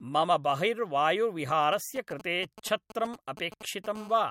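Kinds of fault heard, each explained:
GSM signalling bursts: From 1.73 to 3.86 s, a nearby 2G phone exchanging signalling sends short groups of radio pulses that the audio circuit rectifies. They come through as galloping dit-dit-dit ticks and brief 217 Hz buzzes, roughly 15 dB below the speech, broken up rather than continuous.
GSM phone buzz: From 3.95 to 4.26 s, the phone is in a call and transmits 217 bursts a second without pause. Rectified, this becomes a steady, hard, raspy 217 Hz buzz rich in harmonics, about 20 dB below the speech, unbroken unlike the earlier galloping pattern.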